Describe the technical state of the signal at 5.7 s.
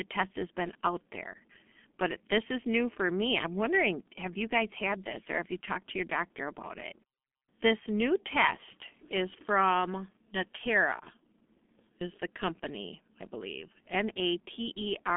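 G.723.1 codec damage runs throughout, including 5.7 s: 30 ms frames and a slow-updating voice model leave speech hoarse and muffled, with nothing above 3.7 kHz, consistent with roughly 6 kbit/s.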